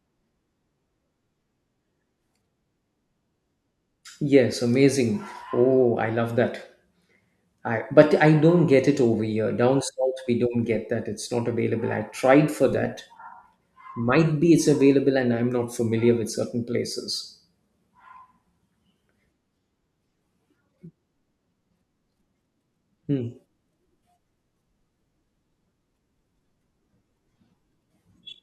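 No technical faults detected.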